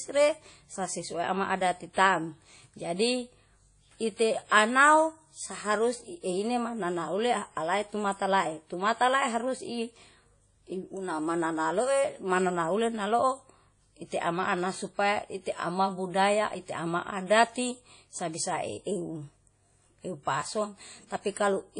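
Speech, carrying plainly audible WMA compression throughout: nothing above 10.1 kHz, with ringing, washy smearing and breathing hiss, likely from a transform encoder at about 32 kbps.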